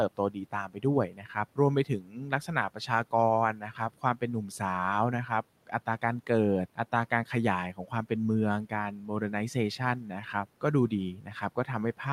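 Speech cut by the noise suppressor occurs at 0.17–3.13, 3.53–4.61, 5.28–6.29 and 10.61–11.99 s. The suppressor mistakes quiet speech for noise and lowers it by about 10 to 12 dB. That is roughly a second in the first stretch and only brief moments in the others, leaving soft sounds swallowed and faint.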